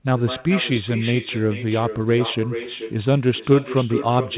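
Speech arriving over a call whose far end plays it through a loudspeaker with no echo canceller, so its microphone returns the talker's own speech, about 11 dB quieter and roughly 0.4 s late, throughout, through a telephone-band path that stops at 4 kHz.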